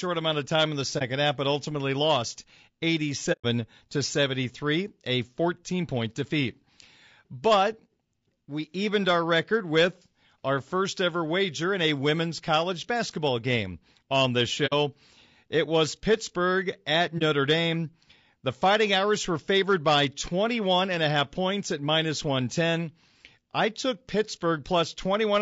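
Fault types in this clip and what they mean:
Low-delay AAC compression: The speech sounds rough and grainy throughout, with noise between the harmonics and a thin, artificial top band. This is likely the low-delay AAC of video calls, whose short frames resolve pitch poorly, at a rate fitting about 32 kbps.
AAC frame loss with muting: Lost AAC frames are decoded as silence. The sound fades out and back in softly. Holes fall at 0.98 s after "of time in the", 3.32 s (about 0.13 s), 14.66 s after "basketball game on this", and 17.18 s.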